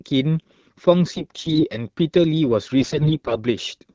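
From 1.16 to 1.65 s and again from 2.80 to 3.38 s, the speech shows AMR bit errors. The less protected bits of each frame arrived corrupted while the check on the core bits still passed. The decoder therefore placed excitation pulses wrongly and used slightly wrong pitch, gain and spectral values. Pitch and level hold roughly steady, but the voice turns hoarse and gargly, noticeably worse in the second burst, which fits a heavier error rate, around one bit in seven against one in ten earlier.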